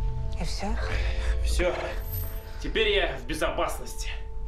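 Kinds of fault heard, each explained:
Repeated frames: a short run of compressed frames was stored or sent more than once, so the decoder played the same slice of audio again instead of moving on. Here a block of 52.2 ms, which fits two compressed frames, plays twice more starting at 1.74 s. That produces a brief stutter through 1.84 s and lengthens the audio by 104.5 ms, pushing everything after it later.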